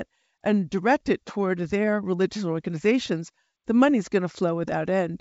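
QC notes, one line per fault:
No faults for the QC notes.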